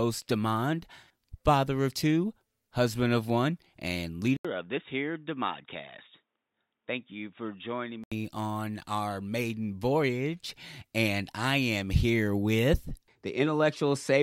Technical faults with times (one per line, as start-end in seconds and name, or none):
4.37-8.12 input switched to a poorer device